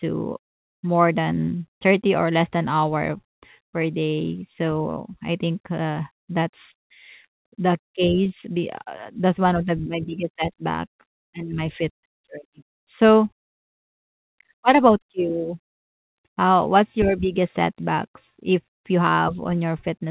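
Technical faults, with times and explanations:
No technical faults are heard, so there are no times or explanations to give, and the speech carries the expected narrow band of a telephone-style call path with nothing above 4 kHz.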